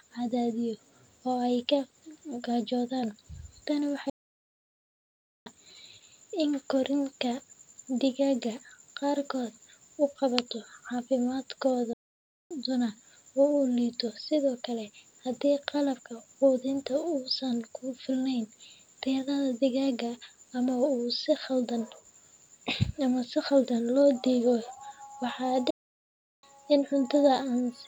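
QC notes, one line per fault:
4.10 to 5.46 s, 11.93 to 12.51 s, 25.70 to 26.43 s: playback stall. The speech halts mid-flow into full silence for about 1.36 s, 0.57 s and 0.72 s. The likely cause is the player running dry or its thread blocking. These pauses last far longer than a millisecond dropout.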